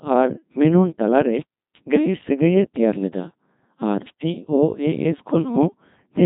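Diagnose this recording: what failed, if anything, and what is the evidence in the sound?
The failure is at the codec stage: a Codec 2 vocoder throughout. The speech sounds robotic and buzzy, and nothing reaches above 3.8 kHz. It is rebuilt from pitch and envelope, which fits about 2.4 kbit/s.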